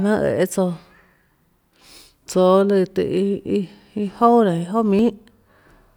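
Speech, with periodic USB or driver dropouts from 4.99 s to 5.71 s: about four short gaps, each roughly 10 ms, recurring every 0.24 s. The missing audio is skipped rather than silenced, so each loss is a regular tick caused by something blocking the audio path on a fixed schedule.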